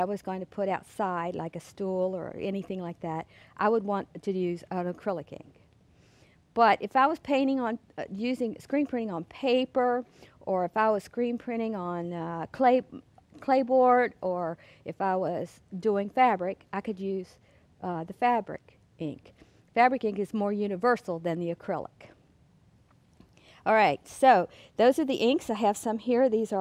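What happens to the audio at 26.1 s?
Nothing goes wrong at 26.1 s; the audio there plays through cleanly, with no dropout, click or other fault.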